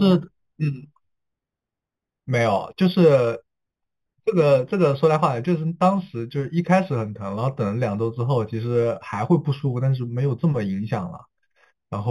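Speech, affected from start to finish by imaging from linear upsampling. The audio was raised to a higher rate by joining samples with straight lines, and the sound fits an 8 kHz source brought up to 44.1 kHz. That crude interpolation dulls the top of the original band and leaves a faint mirrored copy of the spectrum in the 4 kHz to 8 kHz region, roughly 30 dB below the speech, which adds a light metallic shimmer to sibilants.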